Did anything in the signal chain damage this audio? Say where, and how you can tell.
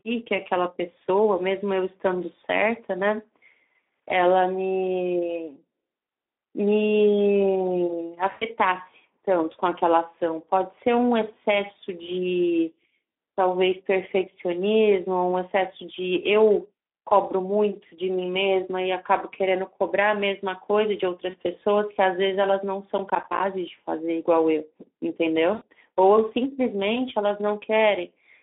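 Yes. At the codec stage, the Speex codec damages the whole clip. The sound is confined to roughly 250 Hz to 3.5 kHz and the low-bitrate CELP coding is plainly audible as a hoarse, noisy roughness. That degree of damage fits a setting around 11 kbps, where too few bits remain for the excitation.

On the network, packets went missing and the decoder's packet loss concealment filled the gaps at 8.31–8.45 s, 21.29–21.35 s and 25.53–25.64 s. Those are losses of about 100 ms, 40 ms and 80 ms. In each, the decoder stretches its last pitch and filter into a buzzy tone or coloured noise that fades, and the sound stays weak briefly after.

At the driver or buffer stage, processor overload crackle runs from 22.98 to 23.4 s. The processor missed a run of buffer deadlines, more than a dozen in a row, and each missed buffer became a hard-edged silent gap. The spacing of the tearing suggests buffers of roughly 10 ms.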